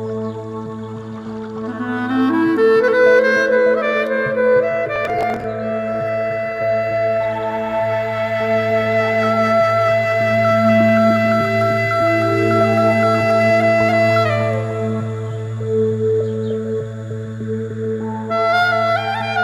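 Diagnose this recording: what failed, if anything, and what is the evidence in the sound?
Processor overload crackle at the driver or buffer stage, from 4.96 s to 5.44 s. For about half a second the audio breaks into a gritty burst of crackle, then clears once the load drops. The processor was missing its deadline for each short audio buffer, repeatedly in a row. Each missed block was skipped, leaving a hard-edged gap. The spacing of the clicks points to buffers of roughly 5 ms, with something like fifteen lost during the burst.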